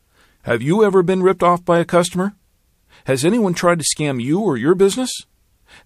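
At 1.39 s, between "you ever been" and "off by a customer", there's a pre-echo: a short hiss about 15 ms ahead of a sharp attack, up about 13 dB. The codec fits a long block of roughly 36 ms and never switches to short blocks, smearing the onset.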